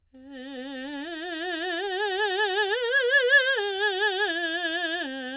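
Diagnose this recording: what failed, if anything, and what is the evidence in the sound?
Nothing failed in this music.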